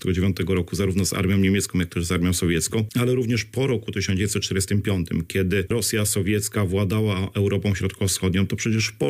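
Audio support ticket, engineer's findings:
Engineer's findings: no audio faults found in this ticket's clip.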